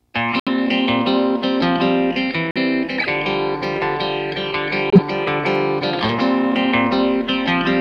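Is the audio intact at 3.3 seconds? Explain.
Yes, the audio at 3.3 seconds is intact, with no dropout, click, distortion or other audible fault at that moment.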